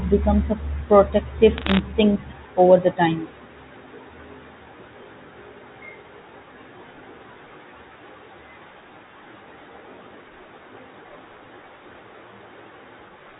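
From 1.58 to 1.79 s, sharp ticks crackle over the speech: bit errors on a digital phone line, flipping under one percent of bits.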